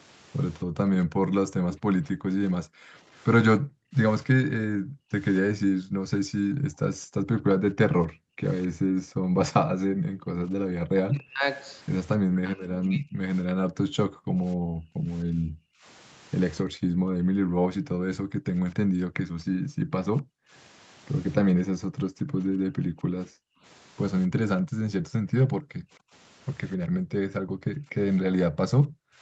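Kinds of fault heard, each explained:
Echo leak: The echo canceller likely let part of its loudspeaker pickup through, so the speech returns as a copy about 261 ms late, around 15 dB quieter.
Background gated by the echo canceller: The canceller turned the microphone down hard while its loudspeaker played, so the room sound repeatedly drops by up to about 40 dB, then returns.
Speech suppressed in double talk: With both sides talking at once, the canceller likely muted its own talker too, so the speech dips by up to about 40 dB or breaks off in pieces.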